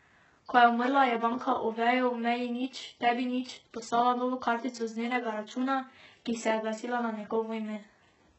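From start to finish the speech carries heavy codec damage, likely from HE-AAC compression at a very low bitrate, around 8 kbps. Nothing reaches above 8 kHz. The treble is rebuilt from copied lower bands, so s sounds turn gritty, lispy and metallic.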